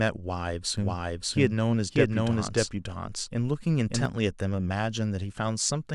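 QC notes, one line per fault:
0.77–4.05 s, doubled audio track: likely a slower second capture path mixed in, so an equally loud, dry copy trails about half a second behind, cutting in and out abruptly.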